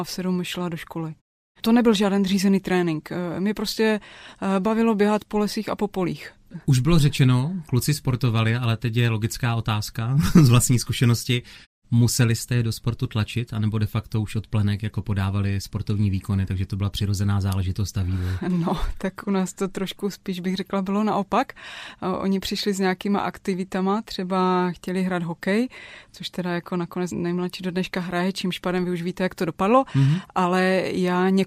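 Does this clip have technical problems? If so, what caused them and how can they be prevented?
No, this speech clip has no technical problems to fix or prevent. In the pauses the background fades to silence and comes back in time for the next sound, with only very quiet sound lost.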